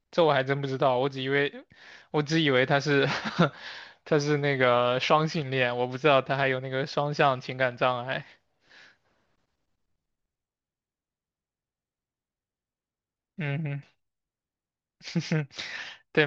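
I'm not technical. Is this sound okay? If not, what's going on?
Yes, this recording sounds fine; nothing here needs fixing.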